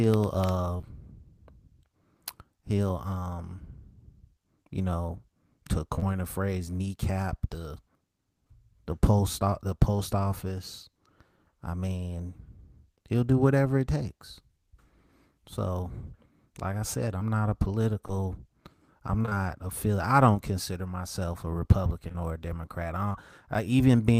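A speech recording with brief smears and ticks where packets went missing and the decoder papered over them. Short concealed packet loss appears at 0.77 to 0.85 s, 5.95 to 6.06 s, 17.19 to 17.22 s and 18.08 to 18.14 s. Each lost packet was about 20 ms of audio that failed to arrive in time, two of them at each of the first two times, and the receiver extended the preceding sound before blending back into the real signal. At 19.22 to 19.35 s the sound turns choppy. This is repeated packet loss: three holes in quick succession, none longer than 19 ms, mean that nearly half of that short span is synthesised continuation rather than received audio. From 22.08 to 23.16 s, a few isolated hiccups come from scattered short gaps. Roughly three lost packets of about 20 ms each were patched individually over that second, so only a small share of the stretch is concealed.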